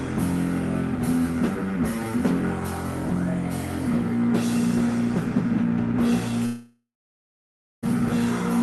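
At 6.45 s a fading buzz gives way to about a second of silence until 7.88 s, and the lost stretch never returns. That's likely a long network dropout.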